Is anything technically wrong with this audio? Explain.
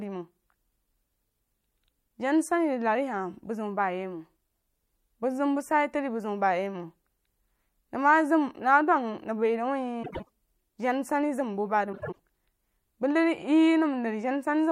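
Yes. Frames out of order occur twice, from 10.03 to 10.29 s and from 11.93 to 12.19 s. In each case two neighbouring runs of audio, each about 96 ms long, are swapped, which fits runs of four frames decoded in the wrong order. The speech in that stretch plays with its halves exchanged. It sounds like a brief garbled flutter. No time is lost.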